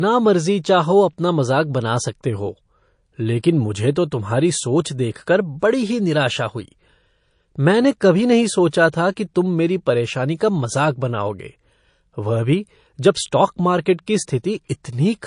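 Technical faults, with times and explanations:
Throughout: MP3 compression. The speech carries plainly audible codec damage, with a watery, swirly texture and metallic chirps on s sounds. Weak frequency lines drop in and out between frames, so the fizz flickers rather than staying steady. The cause is likely a low bitrate, around 40 kbps, leaving the encoder too few bits. Unlike plain low-pass filtering, the damage moves and warbles instead of simply dulling the sound.
5.60 s, 8.71 s and 10.38 s: pre-echo. Before each sharp attack a brief hiss rises, about 14 to 16 dB above the surrounding noise floor and lasting 28, 19 and 23 ms respectively, and the attacks sound softened. The codec spreads quantisation noise across a whole transform block, about 52 ms here, and never switches to short blocks, so noise sized for the loud onset leaks into the quiet moment just before it. It differs from a click or echo because the smear comes before the attack, not after.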